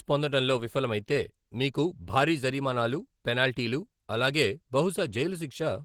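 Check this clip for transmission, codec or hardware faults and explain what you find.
One codec fault runs through the whole clip: Opus voice compression. The speech is in hybrid mode, with linear-prediction coding below 8 kHz and a transform layer up to about 20.4 kHz, and its coarse excitation coding at a rate that fits 16 kbps leaves the voice plainly hoarse and slightly robotic.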